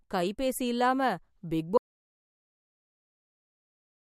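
Speech runs normally until 1.78 s, then an audio dropout to silence cuts it off mid-flow and nothing returns through the end. On a waveform the trace collapses to a flat line; a spectrogram turns fully black, without even room tone. A disconnected input or stray mute is the likely cause.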